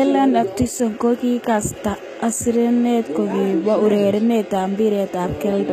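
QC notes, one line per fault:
Throughout, HE-AAC compression, likely: the speech has a plainly audible coded quality in which the treble is bright but synthetic. The low band carries the real signal, while the upper range is rebuilt from copied lower bands shaped by a coarse envelope, so s sounds come out gritty and lispy. Nothing sits above about 14.8 kHz, a damage level that fits a bitrate near 20 kbps. Plain low-pass filtering would sound dull, but this treble is present and wrong.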